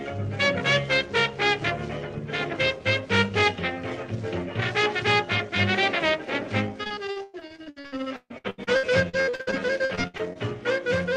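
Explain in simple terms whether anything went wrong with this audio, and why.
From 6.83 to 10.37 s there is repeated packet loss, which gives a robotic sound. Dozens of short dropouts hit in quick succession, the longest about 0.14 s. Each hole is papered over by stretching the preceding sound, so roughly a third of that stretch sounds choppy and mechanical.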